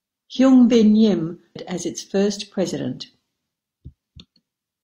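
At 1.52 to 1.56 s, just before "as its first", the speech jumps abruptly forward with a brief blip, likely a stream segment skipped because it failed to load. Unlike a dropout, no silent gap remains; the missing stretch simply vanishes.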